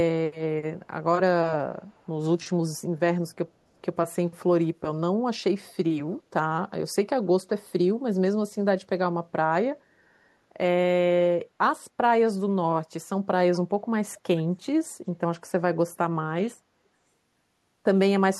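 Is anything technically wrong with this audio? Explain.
Yes. Faint, delayed repeats of the speech surface at 1.87 to 2.08 s, 5.69 to 5.74 s and 13.54 to 13.59 s, arriving about 0.4 s late and very quiet, about 40, 35 and 25 dB below the speech. This is likely an echo leak, where a far-end loudspeaker's sound slipped past the echo canceller and returned.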